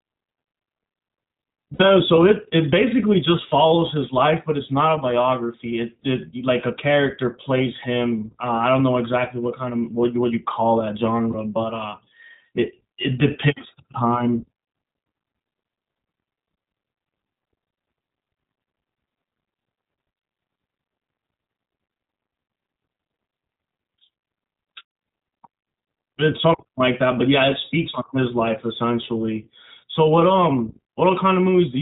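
The whole recording has passed through the iLBC codec, a narrowband VoIP coder that encodes each short frame's excitation independently; the frame rhythm fits 20 ms frames and the quality points to its 15.2 kbps mode. Everything above 4 kHz is cut away, and the coding damage is plainly audible: the speech stays intelligible but sounds dull, slightly rough and synthetic throughout.

From 1.74 to 1.82 s, lost iLBC frames leave a gap of about 60 ms, which fits roughly three dropped 20 ms frames. The decoder fills it by repeating the last pitch cycle blended with noise, so the sound briefly freezes into a held, faintly buzzy vowel before normal speech resumes. At 11.32 to 11.35 s a shorter loss, fitting a single 20 ms frame, gives only a brief held, buzzy vowel. Because each iLBC frame decodes on its own, the voice recovers almost immediately after both.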